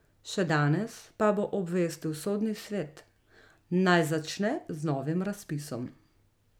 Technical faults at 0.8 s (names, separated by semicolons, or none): none